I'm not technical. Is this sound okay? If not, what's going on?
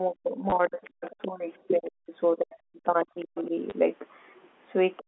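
No. The speaker's voice sinks and drops out in pieces from 0.09 to 2.15 s, again from 2.34 to 3.53 s, and in the last moment from 4.99 s to the end. This is likely speech suppressed in double talk: both sides spoke together, and the echo control dimmed the talker along with the echo.

Twice, at 0.50 to 0.52 s and 3.70 to 3.72 s, there is a tiny robotic stutter. That is packet loss with the last packet repeated: a brief slice of audio went missing, and the player repeated the previous slice to fill the gap.

Faint scraps of a second voice sit underneath at 0.84 to 0.90 s, 1.07 to 1.28 s, 3.35 to 3.46 s and 4.97 to 5.03 s. That sounds like the other side's voice leaking through, likely from a loudspeaker that the echo control didn't fully remove from the microphone.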